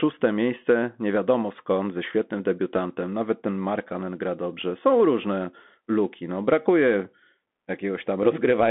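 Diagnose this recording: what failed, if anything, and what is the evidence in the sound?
The speech went through a Bluetooth CVSD headset codec at the codec stage for the whole recording. CVSD sends one bit per sample, stepping up or down with an adaptive step size, which fits a 64 kbit/s headset link. The band runs from about 200 Hz to 3.5 kHz, with nothing above 3.8 kHz. The codec damage is plainly audible: s sounds come through scratchy, loud bright passages distort where the step can't keep up, and a granular hiss sits under the speech.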